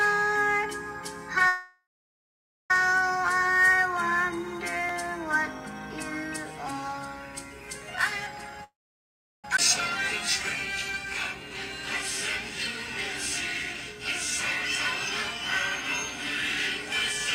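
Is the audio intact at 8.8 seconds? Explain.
No, not really. At 8.8 s you're inside a call audio freeze that runs from 8.64 to 9.45 s, about 0.8 s long. The likely cause is packets getting held up in transit so the jitter buffer runs dry. The last sound gets stretched briefly, then there's about 0.72 s of silence. When audio resumes it picks up right where it stopped, with nothing lost, but everything after is pushed back by about 0.8 s.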